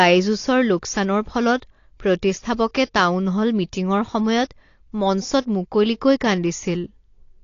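Throughout, heavy AAC compression, likely around 32 kbps AAC-LC, removes everything above 7.1 kHz, leaving the speech dull, smeared and plainly codec-damaged.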